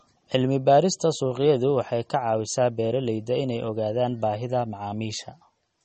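From start to finish the speech carries plainly audible damage, likely from MP3 compression at a low bitrate, around 32 kbps. Nothing sounds above 8.4 kHz, where a flat ceiling shows on the spectrogram. Sparse high bands flicker frame to frame, giving a watery, swirling texture and smeared attacks.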